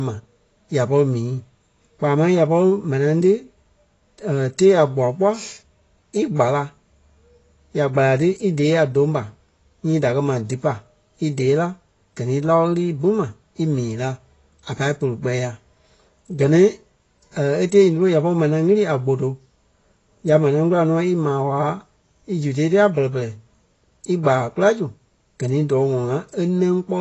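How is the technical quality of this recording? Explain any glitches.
The technical quality is compromised throughout by plainly audible codec damage. Nothing is present above about 7.9 kHz, and the speech sounds dull, smeared and warbling on sustained sounds, with fizzy sibilants. The likely cause is AAC compression: AAC-LC at a low rate quantises the spectrum coarsely, which fits roughly 24 kbps. Unlike a simple low-pass filter, it also leaves that swirling, fizzy texture inside the band that remains.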